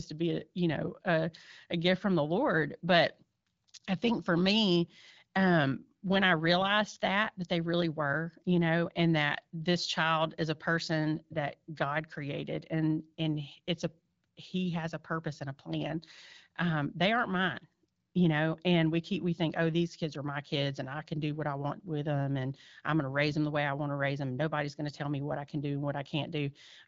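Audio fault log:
No faults are heard in this speech recording. It carries the AMR wideband (HD Voice) codec at 12.65 kbit/s, which keeps the speech clear, with the band above 6.4 kHz filled in up to about 7 kHz.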